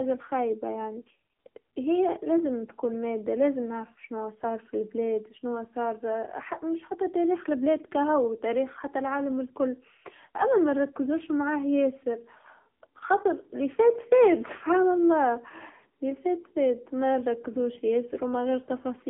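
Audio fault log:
Throughout, AMR narrowband mobile codec. The speech sits in a phone band of 150 Hz to 3.4 kHz, with nothing above. Rebuilt frame by frame from a vocal-tract model and sparse pulses, it sounds heavily buzzy and synthetic, fitting a bitrate near 6.7 kbps.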